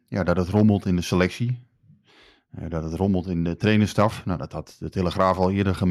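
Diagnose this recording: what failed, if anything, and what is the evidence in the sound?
Nothing failed at any stage.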